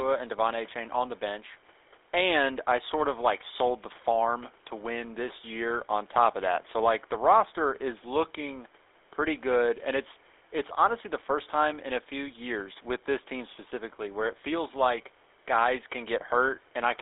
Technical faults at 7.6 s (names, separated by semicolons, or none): GSM full-rate codec